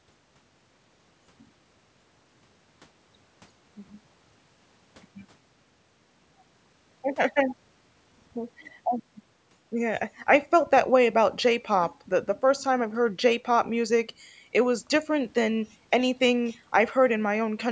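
No technical faults can be heard in the speech; it carries the ordinary marks of a call's microphone processing, with the lowest bass trimmed by its high-pass filter and nothing present above 8 kHz.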